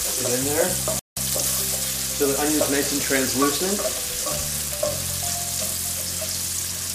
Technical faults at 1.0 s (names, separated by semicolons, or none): playback stall